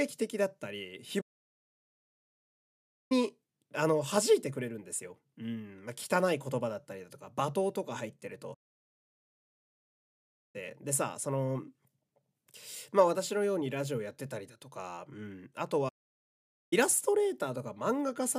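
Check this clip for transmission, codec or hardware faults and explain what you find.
The speech stops dead three times: from 1.21 to 3.12 s (about 1.9 s), from 8.54 to 10.56 s (2.0 s), and from 15.88 to 16.73 s (about 0.83 s). Each is a playback stall, likely the player running out of data or its thread being blocked. Unlike a brief packet dropout, these gaps are long, complete silences rather than clicks or short holes.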